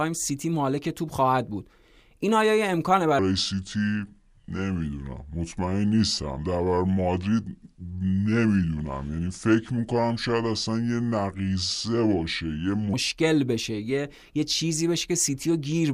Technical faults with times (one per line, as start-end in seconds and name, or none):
3.19-12.94 section at the wrong speed